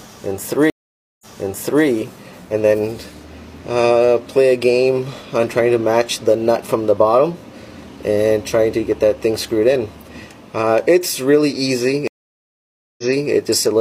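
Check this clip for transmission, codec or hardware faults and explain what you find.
Two stream reconnects turn up. From 0.70 to 1.86 s the audio drops out for 508 ms, then picks up 650 ms earlier than where it stopped. From 12.08 to 13.31 s it goes silent for 906 ms and resumes 325 ms back. Each time the connection broke, the player restarted a fresh decoder, and the server resent a burst.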